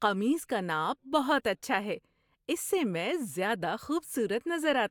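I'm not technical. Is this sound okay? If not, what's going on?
Yes, this speech recording sounds fine, with nothing going wrong that you'd need to worry about.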